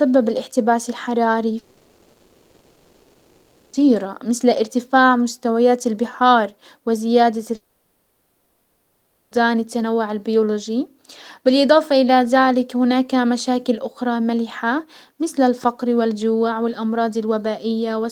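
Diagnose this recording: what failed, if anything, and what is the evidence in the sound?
Network stage, likely a long network dropout: speech stops after "الاحتباس الحراري" at 1.59 s, concealment buzz fills to 3.75 s, resuming at "مسل ارتفاع مستويات البحار"; again after "ارتفاع مستويات البحار وزيادة", 7.55–9.33 s, until "التنوع البيولوجي بالاضافة". The lost stretches are gone.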